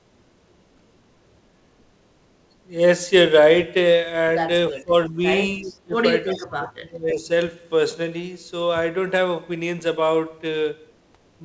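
Speech, carried over a call path whose spectrum stops at 8 kHz, which fits the G.722 wideband codec. Three stretches of speech suppressed in double talk occur, from 4.7 to 5.2 s, 5.66 to 5.96 s and 6.25 to 7.29 s. The level sinks by about 20 dB in the first and about 25 dB in the later two, affecting roughly 0.4 s, 0.2 s and a full second. The likely cause is an echo canceller that, with both ends talking at once, could not tell this talker from loudspeaker echo and attenuated everything. On a waveform these show as abrupt pinches in the envelope, and on a spectrogram as faded or gapped bands with the upper harmonics thinning first. Between 5.63 and 5.77 s there is also an echo leak: a faint, delayed copy of the voice, trailing by 333 ms and sitting around 30 dB below the speech. It is likely residual loudspeaker pickup at the far end that the canceller failed to remove and sent back. On a spectrogram it appears as a weak smear repeating the earlier harmonic pattern about a third of a second later, too low to show clearly on the waveform.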